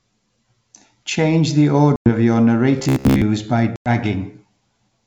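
At 1.96 to 2.08 s, and again at 3.76 to 3.89 s, there is packet loss on an ADPCM call. Each time about 100 ms drops to hard-edged silence, which fits roughly five lost packets. The decoder's predictor and step size lose track of the sender's. So the speech comes back with brief, slight distortion.

From 2.78 to 3.23 s the speech turns into a rigid, metallic buzz near 66.8 Hz. It still loosely follows the speech. The likely cause is robotic sound from repeated short buffers: a chunk of about 15 ms is replayed over and over, and most of the real audio in that stretch is skipped.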